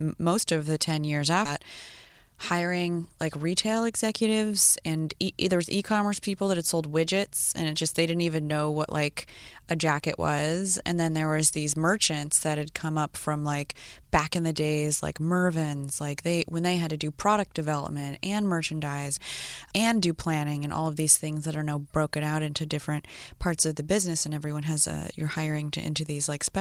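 Speech, with two timing faults close together near the start. Between 1.45 and 1.59 s there is a skip ahead: roughly a third of a second of audio never plays, and the sound on either side of the cut is butted together with essentially no gap, so the speech lurches forward. Later audio was already waiting when the stretch in between was dropped, pulling the playout delay down by about the same amount. Right after, from 2.10 to 4.22 s, a jitter buffer speed-up runs: the receiver trims short pitch-period-length slices again and again, removing somewhere around 150 ms in total. Playback runs at about 107% of normal rate while pitch stays unchanged, so that two-second stretch sounds slightly rushed and compressed compared with the speech around it.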